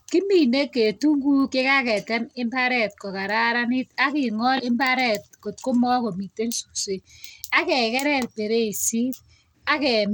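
A low bit pool in the encoder is the likely cause: the speech sounds as if it passed through Bluetooth SBC compression at a rate that points to roughly 96 kbps, for the full length of the clip. Starved of bits, the upper sub-bands thin out and flicker, so the treble comes and goes, while coarse quantisation of the remaining bands leaves a plainly audible gritty roughness and aliasing riding on every syllable.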